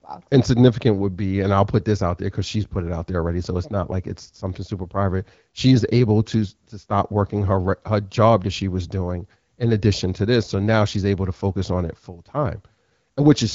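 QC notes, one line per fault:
The speech has the band-limited, faintly synthetic character of AMR wideband (HD Voice) coding with only light coding damage, consistent with a rate of about 12.65 kbit/s, and no faults are present.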